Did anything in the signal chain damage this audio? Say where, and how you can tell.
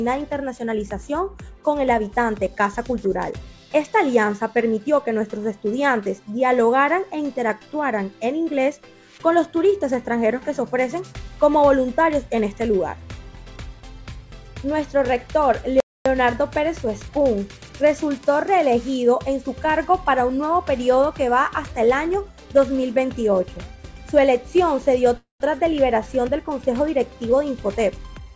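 Yes. At playback, the player likely ran dry or was blocked, and the sound drops out from 15.80 to 16.06 s, about 0.25 s, then resumes where it stopped.

On the network side, delayed packets likely emptied the jitter buffer. A fading fill runs from 25.17 to 25.42 s, with 130 ms of it silent, and the audio resumes without losing anything.

In call processing, the jitter buffer speed-up trims short pitch-period slices to cut the built-up delay. From 27.20 s to the end, the sound runs at 106% speed with unchanged pitch.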